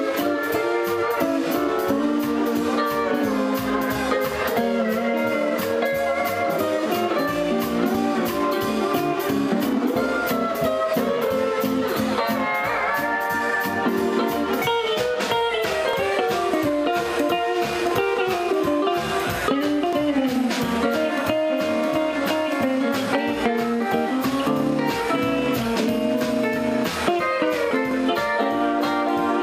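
Brief skips at 11.94, 15.93, 19.93, 23.92 and 27.91 s, each losing a few milliseconds, are likely audio missing between chunks. Their strict 4 s spacing distinguishes them from random dropouts.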